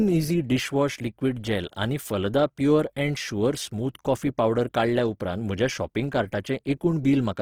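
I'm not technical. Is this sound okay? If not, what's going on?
No. Throughout the speech, the sound is rough and grainy, with a noisy, fizzy texture in place of clean tone. This is likely Opus compression, squeezed hard enough that the encoder fills in missing detail with approximations rather than the real sound.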